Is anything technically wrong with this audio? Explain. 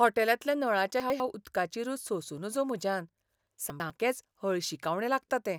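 Yes, there are two spots where chunks play out of order in this speech clip. From 1.0 to 1.2 s and again from 3.7 to 3.9 s, a 100 ms chunk turns up one chunk late, so the piece that should come second plays first. Nothing goes missing, but the order flips and you get three hard joins each time. That comes through as a quick jumbled, garbled moment.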